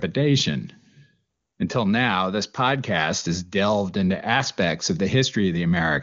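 Speech carried over AMR wideband (HD Voice) at what sounds like one of its upper rates, with no audible technical fault.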